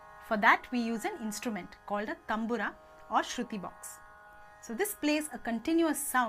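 No technical faults can be heard anywhere in this audio. There is no point in the clip that needs a timestamp or a repair.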